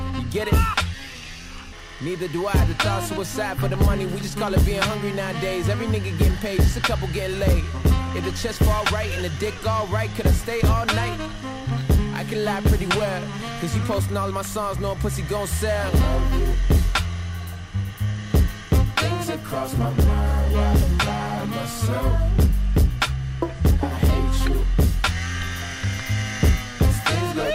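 Crude rate conversion runs through the whole clip. Samples were repeated rather than filtered, which fits a change from 44.1 kHz to 48 kHz. The resulting error sits about 30 dB below the sound. It adds a gritty, inharmonic fizz that tracks loud and high passages.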